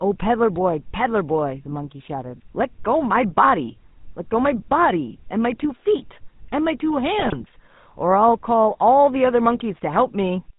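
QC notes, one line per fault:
throughout: GSM full-rate codec. Buzzy, gravelly roughness from a vocal-tract model driven by sparse, regularly spaced pulses, which fits a 13 kbps full-rate coder. The spectrogram shows nothing above 4 kHz and coarse, smeared harmonics. The waveform shows pulse-like excitation.
7.19–7.35 s: GSM bit errors. The audio breaks into squawks, pops and gargling as corrupted filter, pitch and gain values reach the decoder. This points to a weak link with roughly 2% of bits flipped. Expect level spikes in the waveform and sudden distorted spectral bands.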